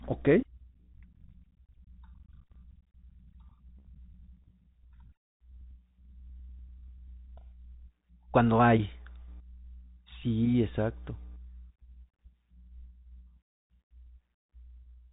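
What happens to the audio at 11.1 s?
At 11.1 s the speech, like the whole clip, passes through a Bluetooth CVSD headset codec: one-bit delta steps encode the signal and nothing above 3.8 kHz passes, leaving scratchy sibilants, granular hiss, and a spectrogram that goes blank above that line.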